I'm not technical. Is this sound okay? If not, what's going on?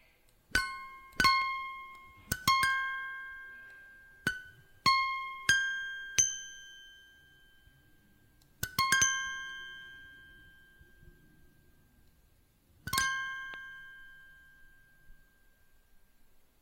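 No. There are two loud pops, at about 1.42 seconds and again at 13.54 seconds. Each is a single short, sharp pop, a bit louder than the sound around it. The sound itself carries on underneath without a break. A pop like this is a sudden electrical jolt added to the signal, most likely from a plug, a switch, static, or a brief glitch in the equipment.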